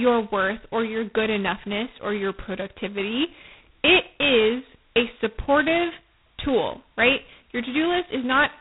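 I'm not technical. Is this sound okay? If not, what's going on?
No. The speech was squeezed through G.726 ADPCM, a telephone-style compression, at its lowest setting, which keeps only a rough guess of each moment. That leaves a harsh, rasping hiss riding along with the speech throughout, and nothing above 3.9 kHz, so it sounds dull and muffled.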